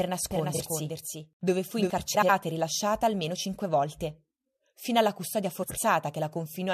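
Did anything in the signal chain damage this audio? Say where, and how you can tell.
Yes. From the start to 1.9 s, just before "e rilasciata almeno cinque", there is a doubled audio track: a dry, full-band copy sits about 0.4 s behind the original and about 5 dB quieter, then cuts off abruptly. The likely cause is a second, slower capture path.

Frames out of order, a stream or decoder fault, cause a brief garbled flutter at 0.54–0.60 s, at 2.14–2.29 s before "e rilasciata almeno cinque", and at 5.63–5.78 s after "cinque volte fino alla". Adjacent blocks of about 23 ms and 70 ms play swapped, with no time lost.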